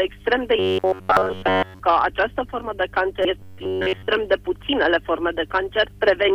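A steady low tone at 50 Hz runs under the whole clip, about 25 dB below the signal. This is mains hum, where a ground loop or nearby transformer leaks the power line into the audio.

From 0.59 to 1.80 s the sound turns into a rigid, metallic buzz pitched at 93.8 Hz. This is robotic sound from repeated short buffers, likely caused by audio arriving too seldom so that the last segment of roughly 10.7 ms is replayed in place of all the real material.

At 1.17 s a brief blip cuts into that buzz. At 3.22 to 3.25 s a short glitch follows. Both are damaged data in a compressed stream, where the decoder misreads corrupted frames and resyncs at the next header.

From 3.39 to 4.08 s the same 93.8 Hz metallic buzz returns, with most of the sound replaced, again likely from short buffers repeated while incoming audio ran late.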